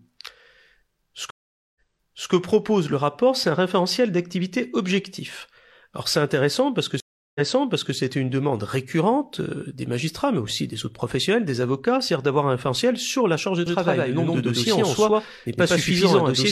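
A speech clip with two brief dropouts, at 1.30 s for 0.45 s and at 7.00 s for 0.35 s, each resuming slightly in the past (0.56 s and 0.60 s earlier), so material repeats. That is a stream reconnect: the connection broke, the player restarted its decoder and the server resent a burst. From 13.66 s to the end, an identical full-band copy trails roughly a tenth of a second behind at about equal level, with no decay or room colour. That is a doubled audio track, likely from a second, slower capture path.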